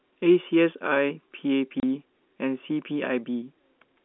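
At 1.8 s the speech drops out for 30 ms, a packet loss filled with silence. That gap fits a single lost packet replaced by silence. It has hard edges, and the waveform shows a flat line while the spectrogram shows a clean vertical blank band across the telephone-limited range.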